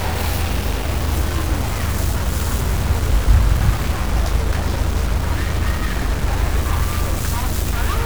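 From start to finish, a harsh, buzzy distortion rides on the sound. It follows the waveform rather than sitting apart from it. Quiet moments do not fall silent. They fill with a steady hiss-like noise. The likely cause is a stuck bit: one data bit held at a fixed value by a broken line or converter. About half the samples are then pushed off by a step of roughly -25 dBFS. That step is large enough to roughen loud passages and fill the gaps.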